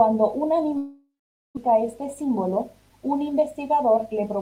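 Speech with a long network dropout from 0.77 to 1.59 s: the last sound smears into a fading buzz, then about 460 ms of silence, and the speech resumes with roughly 600 ms missing. That loss, unlike a short concealed gap, points to a likely stall in packet arrival. From 1.67 to 4.36 s a jitter buffer speed-up plays the speech at 106% speed, trimming around 150 ms as small pitch-period cuts. It sounds hurried but keeps its pitch, unlike a sample-rate mismatch, which would raise it.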